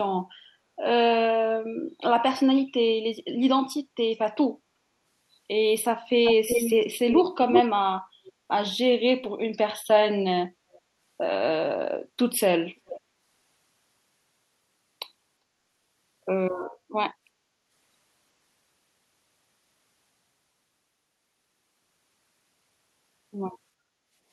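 An echo canceller at the far end, likely with its loudspeaker feeding back into its microphone, fails to remove everything, so an echo leak returns delayed copies of the speech. The first, 6.24 to 6.84 s, is about as loud as the speech itself, then 7.08 to 7.24 s slightly quieter, all about 364 ms late. Faint scraps follow at 8.27–8.32 s and 10.72–10.79 s, then 12.86–13.0 s at about 398 ms.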